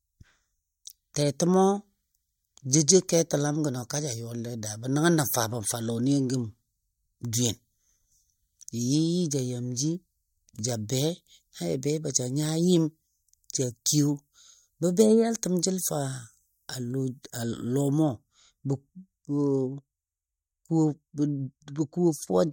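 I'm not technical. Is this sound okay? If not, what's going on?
No. From about 18.02 s to the end, de-emphasis was applied wrongly: a treble cut meant to reverse an earlier treble boost was applied when no boost was there, or was applied twice. The high end is turned down, so the speech turns dull and muffled.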